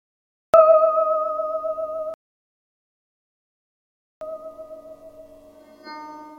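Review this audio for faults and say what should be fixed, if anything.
The capture or stream began late, a cut-off start: from 0 to 0.54 s there is only digital silence, then the music enters abruptly at 0.54 s mid-sound, with no natural attack or fade-in. Starting the recording or stream before the music begins would prevent this.

The player's buffer ran dry, a rebuffering stall: at 2.14 s the music drops to silence until 4.21 s, then picks up exactly where it stopped, adding about 2.07 s without losing any audio. A larger playback buffer or a steadier connection would prevent this.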